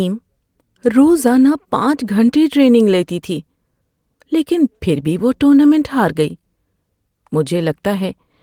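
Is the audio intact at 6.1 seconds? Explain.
Yes, the speech runs through 6.1 seconds without any audible dropout, click, distortion or other fault at that moment.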